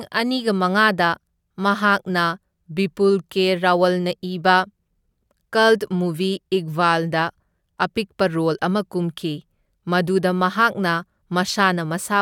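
No technical faults can be heard in this recording.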